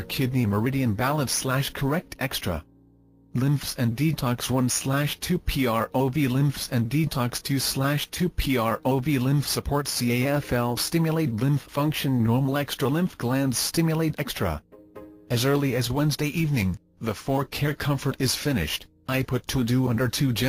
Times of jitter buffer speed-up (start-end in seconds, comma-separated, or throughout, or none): none